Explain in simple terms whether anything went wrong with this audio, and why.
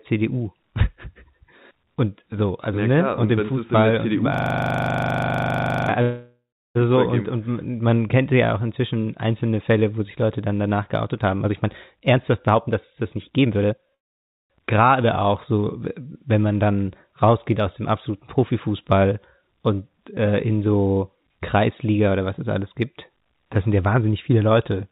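A few things went wrong in this phone-quality speech clip.

From 4.34 to 5.89 s there's a system hang loop. The computer stalled while the sound hardware kept replaying the same 40 ms chunk, about 39 times in a row, so you hear a rough buzz at 25 repeats per second.

Right after, from 6.02 to 6.77 s, there's a call audio freeze. The last sound carries on as a fading buzz and then goes silent for about a third of a second before "so und und man" picks up. Nothing is lost, and the speech just starts later. It happens again from 13.94 to 14.52 s, nearly all of it silence. The likely cause is network packets arriving late, so the receiver ran out of audio to play.

There are also two jitter buffer speed-ups. After "dann danach geoutet haben", from 11.45 to 13.93 s, the speech runs at 125% speed with the pitch unchanged, trimming roughly 0.7 s. From 21.68 to 23.10 s, just before "das sind ja wahnsinnig", it's a milder 110%. 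In both cases the receiver snipped tiny slices out to catch up on delay, which makes the talking sound hurried.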